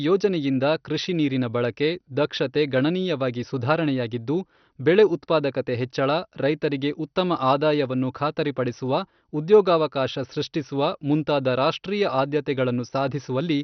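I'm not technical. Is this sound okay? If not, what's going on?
No, the speech sounds dull and badly gurgly all the way through, with nothing above about 6.1 kHz. That's likely MP2 compression squeezed too hard: the top bands get switched off and the rest turn grainy, like weak digital radio.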